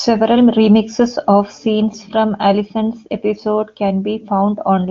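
The speech carries no technical faults, with content ending near 7.3 kHz in the way of AMR wideband (HD Voice) coding, whose clarity fits one of its highest rates, near the 23.85 kbit/s top mode.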